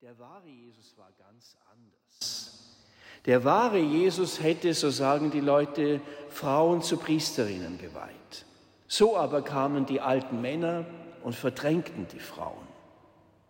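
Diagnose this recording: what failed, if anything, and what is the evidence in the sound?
Audio dropout to a faint residue, already under way when the clip opens and lasting until 2.21 s, leaves only a faint leak roughly 25 dB down before the sound snaps back. Likely an intermittent analogue connection with the path still live.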